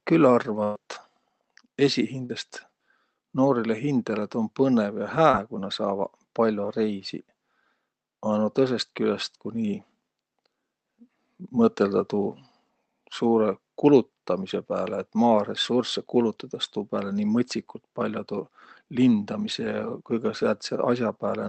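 At 0.63 s a burst of packet loss removes about 120 ms of speech, up to 0.77 s. The receiver stretches the last sound and fades it, so a held buzz or hiss replaces the missing stretch. On a spectrogram this appears as frozen, flat harmonics or noise that dims before the speech resumes further on.

Short concealed packet loss follows at 2.25 to 2.31 s (about 40 ms patched) and at 5.31 to 5.35 s (about 20 ms), just before "ku nä". Each gap is filled from the preceding sound and blended back, giving a brief smear or wobble. In the waveform these show as tiny, overly smooth segments, and a consonant may be missing. The Opus call path's band limit is also visible, with no energy above 8 kHz.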